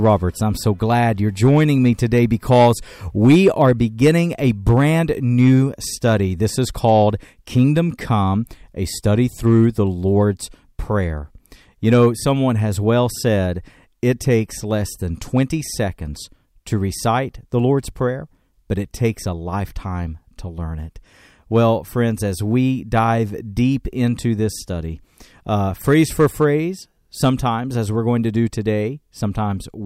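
A gain stage upstream drove this speech recording about 4 dB past the ceiling of the converter or number format, so every peak that crossed full scale was sliced flat, a case of hard clipping running through the whole clip. Only a small fraction of samples actually hit the limit, so rather than a constant fuzz, the flattened tops show up as brief crackle and a hard edge on the loudest syllables, adding harmonics high above the speech.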